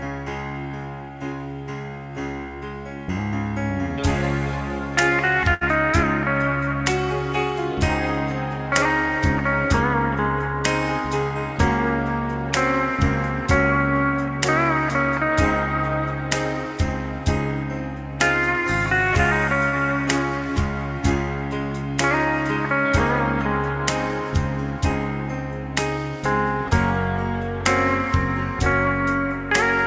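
From 5.54 to 5.64 s the last sound is held and fades for about 69 ms, then jumps ahead: a burst of packet loss, with roughly 60 ms of audio never arriving. At 19.69 to 19.75 s a brief smear marks short concealed packet loss, where the receiver filled about 30 ms of missing audio by continuing the preceding sound. Throughout, the G.722 call path leaves nothing above 8 kHz.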